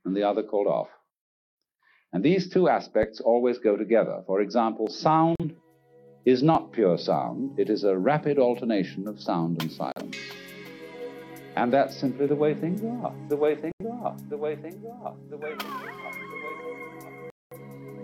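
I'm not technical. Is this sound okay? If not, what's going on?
No. There are four brief digital broadcast dropouts, at 5.36 to 5.45, 9.92 to 10.02, 13.72 to 13.83 and 17.30 to 17.56 seconds. The receiver briefly lost the signal and went silent. Unlike a crackly loose connection, each gap is clean silence, and what was broadcast during it is gone.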